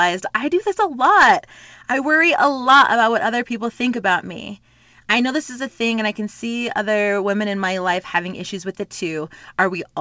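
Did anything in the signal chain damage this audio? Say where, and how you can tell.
No, nothing in the signal chain damaged this audio.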